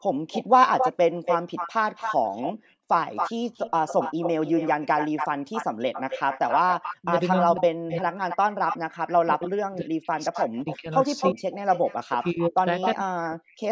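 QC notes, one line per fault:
0.13 to 0.27 s and 2.53 to 2.88 s, background gated by the echo canceller: the room tone falls away abruptly, by about 40 dB at its deepest, for roughly 150 ms and then roughly 300 ms, and returns just as abruptly. The echo canceller pulled the microphone down hard while the loudspeaker was active. The room sound drops here, which separates these drops from the double-talk suppression later on.
0.32 to 9.49 s and 10.34 to 12.95 s, echo leak: a second copy of the speech trails the original by about 270 ms (271 ms, then 264 ms) and sits only about 5 dB below it. The likely cause is a far-end echo canceller that left residue from its loudspeaker in the microphone signal and sent it back. The fixed delay and separate, distinct copy tell it apart from room reflections, which smear continuously.
7.01 to 8.24 s, 9.25 to 11.43 s and 12.04 to 13.71 s, speech suppressed in double talk: the talker's voice dips by about 40 dB for a total of roughly one second within each span. 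This is likely an echo canceller that could not separate the near talker from the loudspeaker echo while both sides spoke, so it attenuated everything. Unlike the background gating, the speech itself is cut. All three spans also overlap the echo leak.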